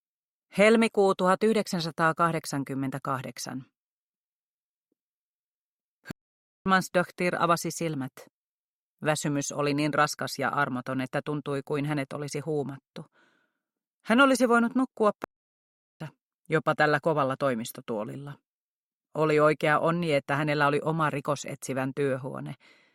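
At 6.11 s the sound cuts out in mid-flow. Silence holds for about 0.55 s, until 6.66 s. A second gap opens at 15.24 s and lasts about 0.76 s, ending at 16.00 s. Both are playback stalls. The player likely ran short of data, or its thread was blocked, so the output went silent until it recovered.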